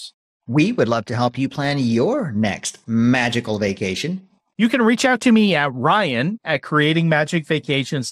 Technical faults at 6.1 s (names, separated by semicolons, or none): MP2 compression